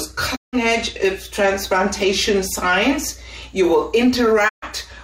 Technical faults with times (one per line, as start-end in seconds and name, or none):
0.35-0.55 digital broadcast dropout
4.47-4.64 digital broadcast dropout